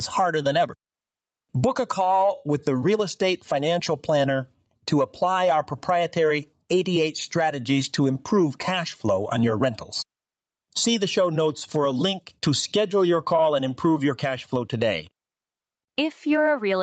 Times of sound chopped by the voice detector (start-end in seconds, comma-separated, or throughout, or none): none